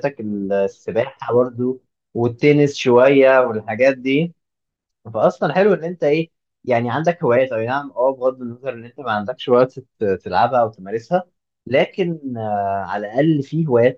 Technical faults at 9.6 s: sample clock jitter

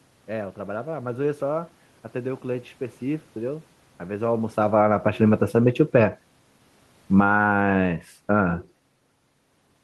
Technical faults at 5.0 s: automatic gain falling; automatic gain rising

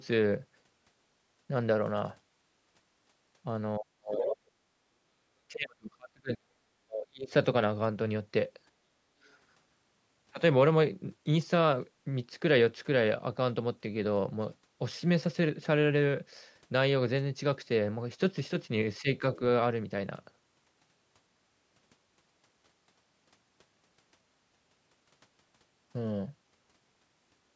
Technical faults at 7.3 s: speech suppressed in double talk

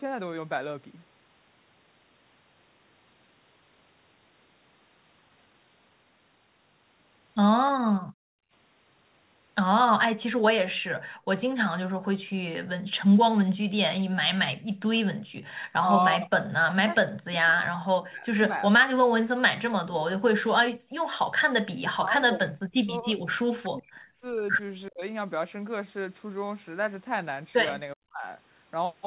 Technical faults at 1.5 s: none

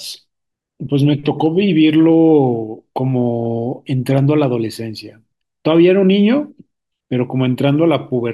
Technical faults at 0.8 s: none

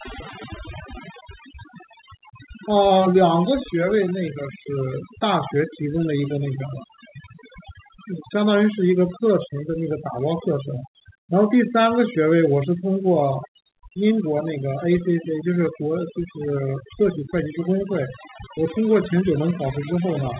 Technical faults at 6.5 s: overdone noise removal

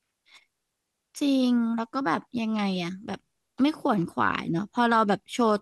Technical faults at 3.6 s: none

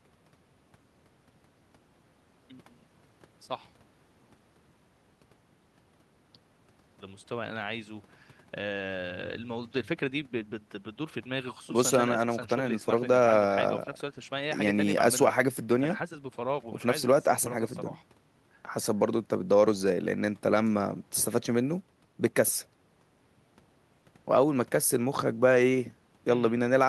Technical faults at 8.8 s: none

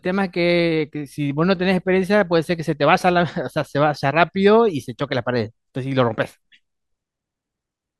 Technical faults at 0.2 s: none

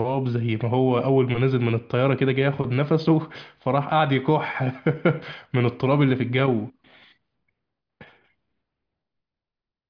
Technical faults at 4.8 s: none

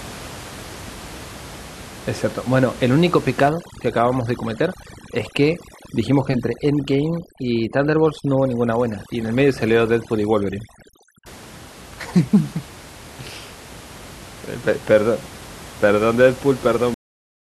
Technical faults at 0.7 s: none

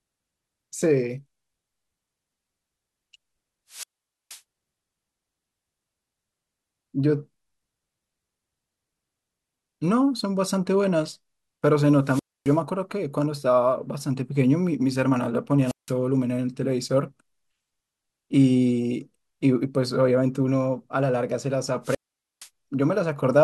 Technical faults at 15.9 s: wireless microphone squelch dropout

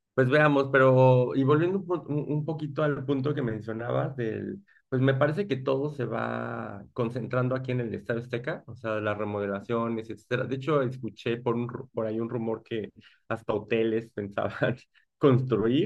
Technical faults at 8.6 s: none

